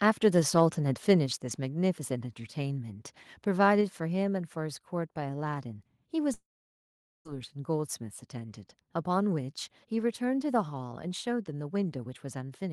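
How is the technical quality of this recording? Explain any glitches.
The recording has three clear glitches: two sudden drops in level and one long gap where the sound breaks off.

At 1.26 s and again at 3.81 s, the speech and the background noise behind it both fall abruptly in loudness, by about 4 dB the first time and about 3 dB the second. The background dropping along with the voice points to a change at the input rather than in the talker. These are likely cases of microphone volume stepped down: the call software judged the input too hot and lowered the device's input volume in one step each time.

From 6.33 s to 7.27 s there is a long network dropout, likely caused by packets failing to arrive for roughly 0.9 s. The receiver briefly extended the last sound as a fading buzz or hiss, then gave up, leaving about 0.8 s of silence. When the speech resumes at 7.27 s it picks up further along, so the audio in that stretch is simply missing.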